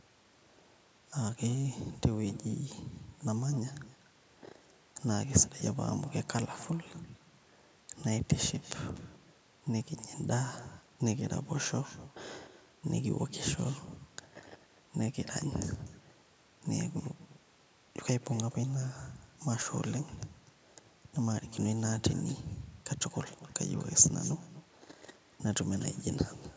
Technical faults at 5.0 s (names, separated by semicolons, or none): echo with no canceller